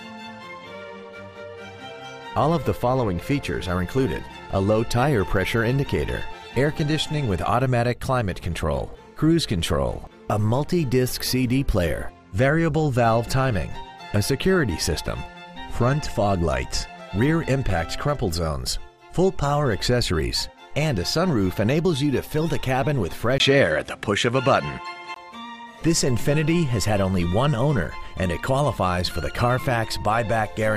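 From 23.38 to 25.16 s, after a 20 ms gap, the sound is cut off above 11.6 kHz and carries faint added noise, likely an input switched to a poorer device.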